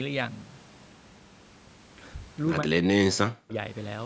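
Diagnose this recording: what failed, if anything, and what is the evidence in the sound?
The speech drops hard from 2.61 to 3.56 s, about a second, falling by roughly 40 dB at its deepest. That's speech suppressed in double talk in the call processing: the echo canceller likely mistook the near talker for loudspeaker echo while both sides spoke, and ducked everything.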